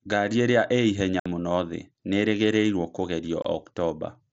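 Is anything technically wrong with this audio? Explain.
Yes, there's unconcealed Bluetooth headset packet loss over the wideband mSBC link. Around 1.20 to 1.26 s, just after "ĩrĩa ĩ ihenya", about 60 ms of packets vanish and get replaced by silence or an idle pattern, leaving an abrupt hole. At 3.42 to 3.45 s, after "ihenya mũno thĩ nĩĩrĩrĩgĩreruo", a shorter 22.5 ms gap does the same.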